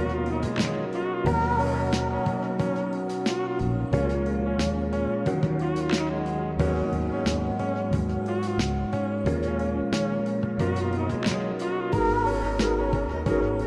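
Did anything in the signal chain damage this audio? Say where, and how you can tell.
No, nothing in the signal chain stood out as doing any damage when I listened to this audio.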